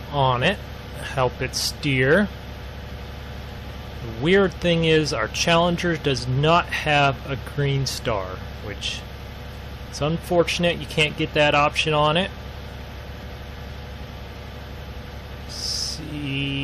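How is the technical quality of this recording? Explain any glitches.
There is one glitch. At 0.43 s, damaged data in the compressed stream makes the decoder misread a frame and lose sync, producing a brief chirp or blip.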